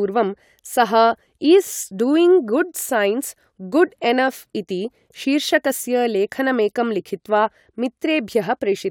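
No technical faults are audible.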